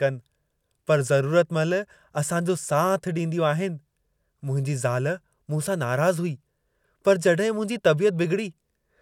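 No technical faults can be heard anywhere in the recording, and the speech signal stays continuous and intact throughout.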